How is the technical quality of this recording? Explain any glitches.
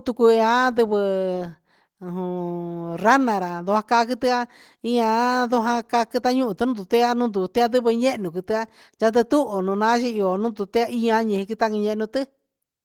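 No glitches or dropouts are audible; the speech reaches up to about 20 kHz through hybrid-mode Opus voice compression at 20 kbps.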